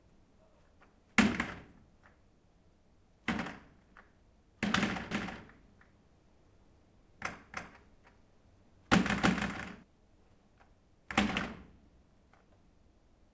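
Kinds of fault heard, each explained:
Doubled audio track: from 5.11 s to 9.83 s a second full-band copy of the sound runs roughly 300 ms behind the first, about 5 dB quieter. The likely cause is a second capture path or an edit holding two out-of-step copies. It has no decay or room colour, and it appears and vanishes abruptly at both edges. A spectrogram shows every event repeated at that fixed lag, both copies stopping at the call path's 8 kHz ceiling.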